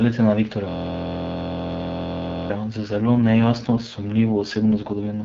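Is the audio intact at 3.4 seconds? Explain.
No. At 3.4 seconds the speech sounds rough and synthetic, with a raspy texture. The band stays put and nothing drops out. This is an AMR rate drop lasting from 2.82 s to 5.24 s. The wideband codec, previously clear at a rate consistent with 12.65 kbit/s, has been pushed down to a much lower mode, most like 6.6 kbit/s. Far fewer bits now describe the speech, so its detail coarsens.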